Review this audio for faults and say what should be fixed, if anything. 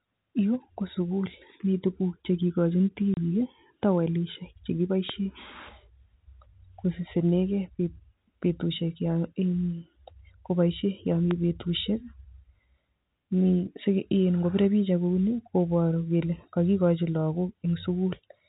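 Packet loss filled with silence: between 3.14 and 3.17 s, packets failed to arrive and the receiver played nothing in their place. The result is a 30 ms hole cut cleanly out of the speech, with abrupt edges. The gap's length fits three consecutive 10 ms packets going missing. The telephone path around it, G.711 mu-law, carries the band-limited speech as expected. Enabling packet loss concealment, with a jitter buffer deep enough to absorb late arrivals, would replace the silence with a smooth fill.

Loud pop: a sudden electrical transient, likely a switching spike or static discharge somewhere in the capture chain, was added to the signal twice. It is heard as a single sharp pop from 5.09 to 5.12 s and another from 11.31 to 11.33 s. Each sits on top of the speech, which continues underneath. The first peaks well above the speech level, roughly 15 dB higher, and the second is somewhat softer at around 10 dB. 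Securing cables and connectors, grounding the equipment properly and muting inputs during switching would stop these transients from reaching the recording.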